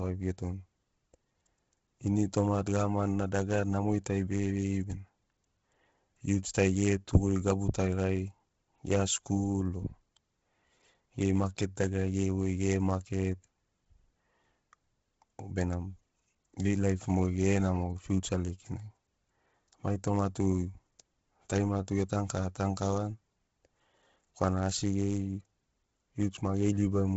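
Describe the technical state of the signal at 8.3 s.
At 8.3 s, like everywhere else, the speech has a breathy, grainy edge with nothing above 7.7 kHz, likely Bluetooth LC3 compression starved at around 16 kbps, noise-filling the upper band.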